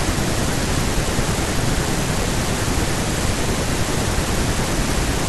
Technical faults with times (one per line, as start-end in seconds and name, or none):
none